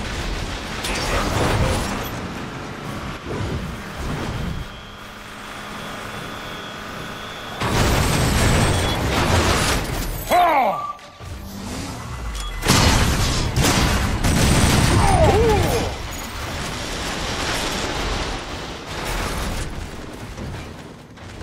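No technical faults can be heard anywhere in the recording.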